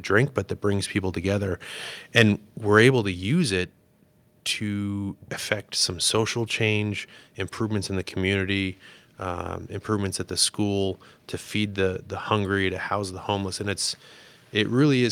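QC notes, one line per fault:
2.17–2.22 s and 2.77–2.80 s, microphone overload: The loudest peaks are flattened at the top, about 4 dB over, then about 1 dB over. Only a small share of samples is cut. This gives a brief harsh crackle. Likely cause: input gain set too high for the converter.
2.91 s, microphone volume stepped down: Speech and background drop together by about 3 dB in one sudden step, just after the second distorted peak. This likely comes from the call software lowering the microphone's input volume after detecting clipping.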